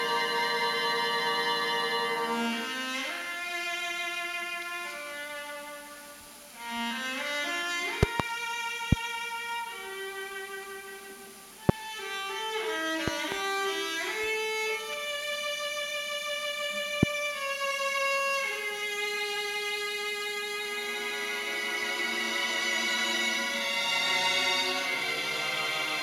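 Loud pops strike as a pair from 8.03 to 8.22 s, then singly at 8.92 and 11.69 s, as a pair from 13.08 to 13.34 s, and singly at 17.03 s. Each jumps roughly 25 dB above the sound, except the pair at 13.08 s at about 20 dB, and the sound continues underneath. A sudden voltage pulse is likely the cause.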